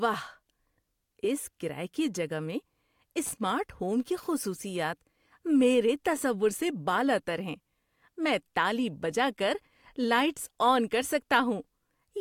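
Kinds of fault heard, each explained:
Loose connector crackle, 3.26 to 3.33 s: a worn or dirty contact in the signal path briefly makes and breaks, chopping the speech into a short, ragged burst of scratchy crackle lasting about 70 ms, just before "ہوم کی خصوصیات".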